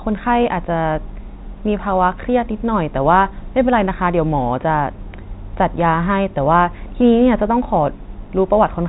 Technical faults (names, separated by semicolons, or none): none